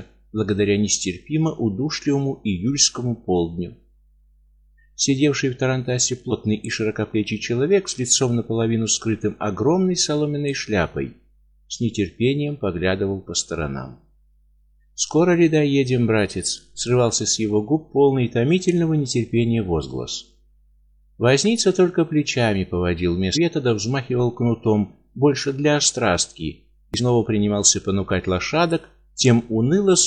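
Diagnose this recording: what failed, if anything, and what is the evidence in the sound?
Damaged data in the compressed stream, at the codec stage: short glitches of roughly 55 to 60 ms at 6.27–6.33 s, 23.32–23.37 s and 26.94–27.00 s. Corrupted bytes make the decoder misread frames there, lose sync and hunt for the next valid frame header.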